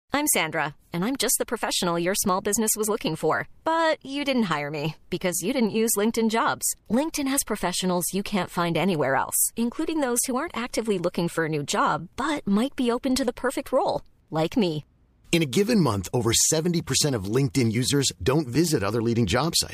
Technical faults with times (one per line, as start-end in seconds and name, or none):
none